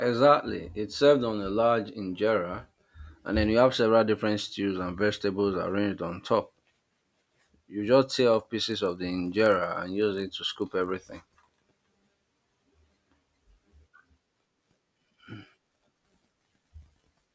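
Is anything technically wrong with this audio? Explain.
Yes. From 8.56 s, after "just tear off", to the end, a 50 Hz buzz rides on the speech: a resampler restarted on every 20 ms block leaves errors at each block edge, likely in a 24 kHz to 16 kHz conversion.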